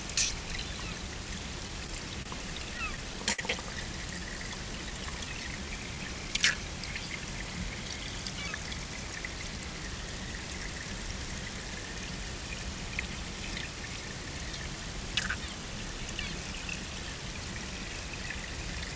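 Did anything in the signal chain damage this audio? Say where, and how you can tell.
Yes. The damage comes from the network and the receiver's jitter buffer. The band stops at 8 kHz, which fits a wideband call codec such as G.722. At 2.22 to 2.27 s there is a short stall from a late packet. One sound holds for about 30 ms too long. A packet came late and the buffer emptied. The receiver stretched the last sound, then resumed from the same point. Nothing is lost, but playback now runs 30 ms later.

From 2.78 to 3.40 s there are repeated stalls, a stutter. The sound catches four times. The longest hold is 60 ms, and the holds add up to 87 ms, about 14% of that stretch. Packets kept arriving behind the playback clock, so the buffer ran dry again and again. Each time the receiver extended the last sound until data arrived. Nothing is dropped, but the passage drags and stumbles.

From 4.19 to 6.55 s there is a jitter buffer slow-down. 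The audio plays at 94% speed with no change in pitch. Sounds are drawn out. The buffer was building up a reserve. To do this it repeated single pitch periods and small pieces of pauses many times. That adds 139 ms in total. The pitch stays put because whole periods were copied rather than the audio being resampled.

From 8.48 to 9.81 s there is a jitter buffer speed-up. The audio rushes at 112% speed, still at the same pitch. The buffer held more audio than its target, as happens after delayed packets arrive in a clump. To cut the delay it removed short pieces of one or a few pitch periods, over and over. Roughly 150 ms is taken out. That is why this stretch sounds hurried.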